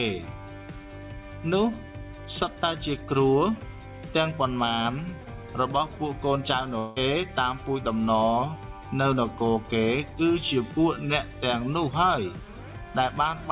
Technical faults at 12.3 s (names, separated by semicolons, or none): none